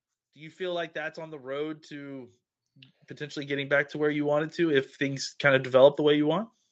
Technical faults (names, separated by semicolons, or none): automatic gain rising